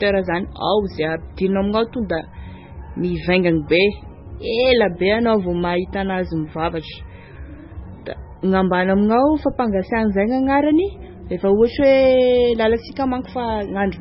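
Speech runs the whole clip with heavy MP3 compression damage, likely from a very low bitrate near 16 kbps: the voice sounds watery and swirly, with smeared consonants. A spectrogram shows a hard ceiling at 5.6 kHz and flickering holes in the weaker bands below it.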